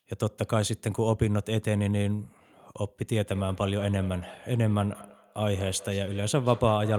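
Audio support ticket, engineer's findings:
Feedback echo between two devices, 3.23 s to end: other device's playback re-enters mic, uncancelled; copies roughly every 200 ms, about 17 dB down, fainter trailing smears on spectrogram.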